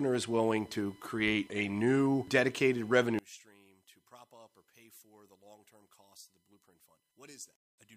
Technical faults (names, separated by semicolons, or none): one channel inverted